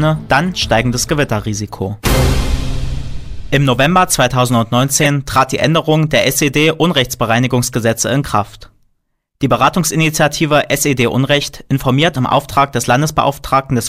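At about 4.98 s there's a corrupt frame decoded, lasting until roughly 5.07 s: a handful of damaged compressed frames got played anyway, so energy lands at wrong frequencies. You hear a short chirpy burst of noise.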